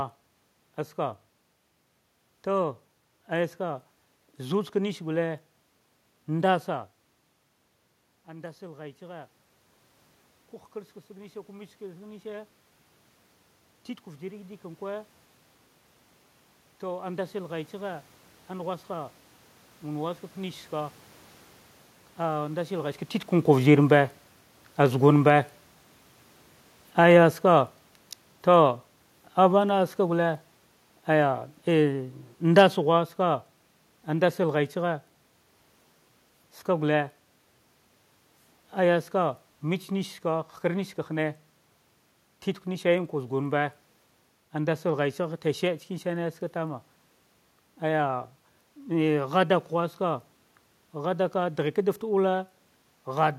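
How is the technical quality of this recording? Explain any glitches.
The recording has one clear glitch, an automatic gain falling fault. From 23.5 s to 34.37 s the speech and the room noise beneath it sink together by about 9 dB. An automatic gain control judged the input too loud or its background noise too strong and pulled its gain down gradually, so everything fades as one. The level shifts near 6.5 s and 22.5 s come from the talker moving relative to the microphone, not from the system.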